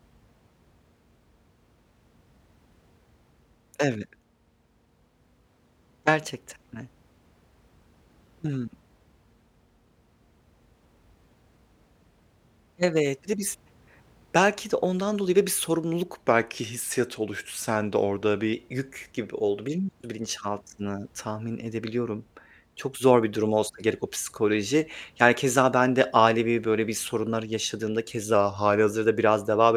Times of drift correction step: 5.04-7.18, 16.20-18.53, 28.34-28.90

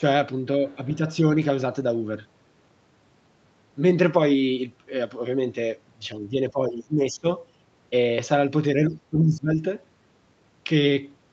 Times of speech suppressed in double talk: 0.00-0.04, 0.76-1.01, 6.08-7.26, 8.76-9.64

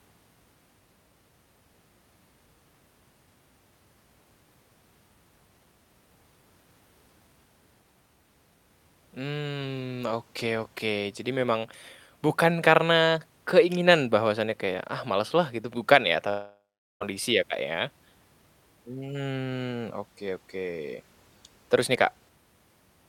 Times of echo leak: none

